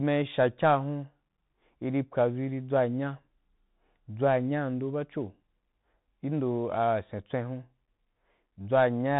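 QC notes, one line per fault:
Throughout, Bluetooth CVSD headset codec: everything stops around 3.9 kHz, so the speech sounds boxed-in and phone-like. The damage is plainly audible. A one-bit up/down coder with an adapting step can't keep up with fast loud detail, which roughens sibilants and leaves a grainy hiss. The sound fits a 64 kbps stream.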